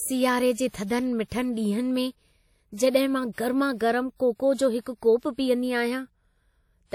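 Throughout the speech, a washy, ringing smear with signal-following hiss points to likely WMA compression near 48 kbps; content stops at 19.3 kHz, so the smear, not band-limiting, is the tell.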